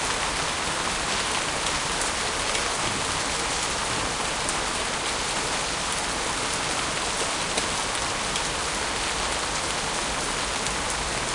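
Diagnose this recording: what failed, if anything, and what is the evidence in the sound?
Listening to this recording of everyday sounds, nothing stood out that would point to a failure at any stage of the chain.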